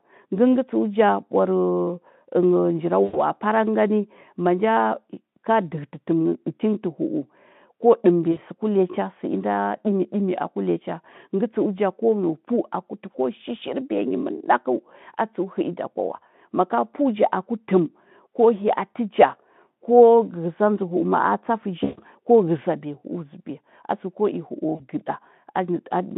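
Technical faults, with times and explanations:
3.03–3.21 s, 8.31–8.39 s, 21.83–22.00 s and 24.75–24.82 s, VoIP packet loss concealed by the speech codec: the audio smears into a buzzy tone or a coloured noise that fades, then comes back a bit weak before settling. Packets went missing, and the decoder kept extrapolating its last pitch and filter while turning the gain down. Gaps of about 100, 60, 140 and 40 ms would fit runs of lost 20 ms frames, with the narrowband Speex line underneath.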